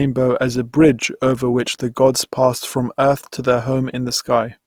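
Throughout the speech, the sound is rough and grainy, with plainly audible damage that points to a low bitrate near 24 kbps, likely from Opus compression in its CELT mode. On a spectrogram, noise-filled upper bands show few holes and stop cleanly at 20.4 kHz.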